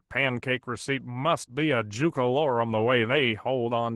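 No technical faults are audible anywhere in the speech recording.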